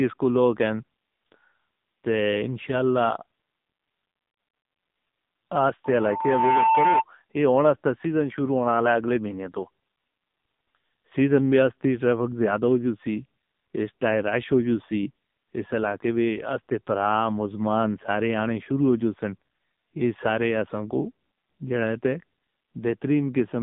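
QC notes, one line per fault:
throughout: AMR narrowband mobile codec. The audio is confined to roughly 150 Hz to 3.7 kHz, with nothing at all above 3.8 kHz. The speech comes out buzzy and synthetic because each frame is rebuilt from a vocal-tract filter and a sparse pulse excitation. The heavy damage fits a low AMR-NB mode of around 6.7 kbps. On a spectrogram, a hard ceiling just under 4 kHz leaves empty black above it, and the harmonics look smeared and blocky.
5.84–7.04 s: loudspeaker feedback squeal. A pure tone at 893 Hz rises out of the speech over about three quarters of a second and peaks a few dB louder than the voice. The microphone was picking up its own loudspeaker, and the loop gain passed unity at that one frequency, so the tone fed on itself until it ended. On a spectrogram it appears as a single bright horizontal line at 893 Hz that thickens as it grows. The waveform's envelope swells over the first 0.7 s of that span.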